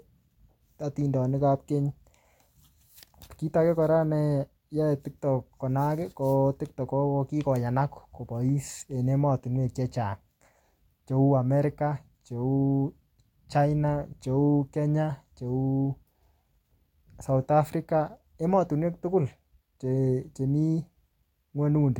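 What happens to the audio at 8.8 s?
At 8.8 s the speech runs on intact, with no dropout, click, distortion or other fault at that moment.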